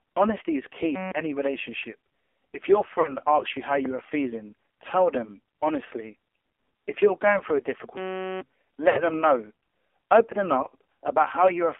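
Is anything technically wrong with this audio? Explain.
Yes, there are three separate problems here.

The whole clip has gone through the AMR narrowband mobile codec, heavily squeezed. The band sits at roughly 300 Hz to 3.4 kHz, and the speech is buzzy and synthetic, which points to a low mode, around 5.9 kbps, where the vocal-tract model gets very few bits.

There are lost AMR speech frames at 3.00 to 3.13 s, just before "asks you how", and again at 8.90 to 9.02 s. Bad frames make the decoder repeat its last pitch and filter settings with falling gain. The result is a short smeared dip, about 40 ms and 60 ms of missing audio, which fits two and three frames.

There's a system hang loop from 7.97 to 8.41 s, right after "you're going through a". The system stalled while the hardware kept replaying one 5.33 ms chunk, about eighty times. That gives a flat 188 Hz buzz instead of speech, with roughly 0.4 s of audio gone. 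The chunk length fits a 256-sample buffer.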